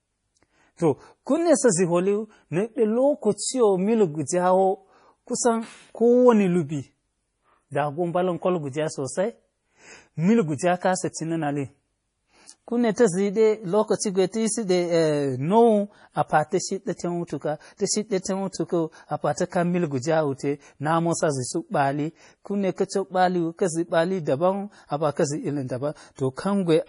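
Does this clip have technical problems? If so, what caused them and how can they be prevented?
Yes. Throughout the speech, everything above about 10.6 kHz is missing, and the sound has a watery, swirling quality with smeared consonant onsets. That points to heavy MP3 compression, likely at a bitrate around 32 kbps. Unlike a plain low-pass filter, the remaining band also flickers as weak components drop in and out between frames. Encoding at a higher bitrate, or keeping a lossless copy, would prevent it.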